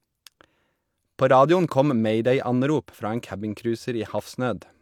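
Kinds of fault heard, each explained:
No technical faults are audible anywhere in the speech.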